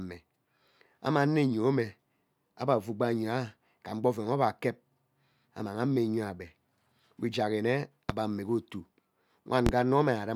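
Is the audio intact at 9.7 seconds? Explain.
No, there's a loud pop from 9.66 to 9.70 s, likely a voltage spike from a plug or switch, landing roughly 20 dB above the speech, which continues underneath.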